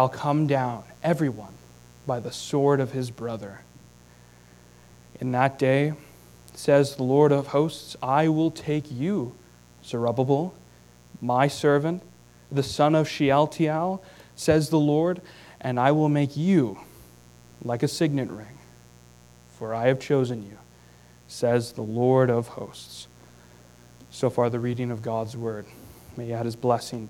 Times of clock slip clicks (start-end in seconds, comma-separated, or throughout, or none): none